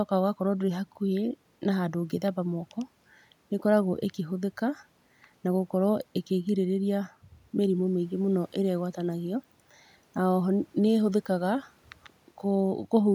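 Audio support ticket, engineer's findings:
No system fault found in the speech signal; the only background is room noise from the microphone's surroundings, sitting about 40 dB below the speech and part of the recording itself.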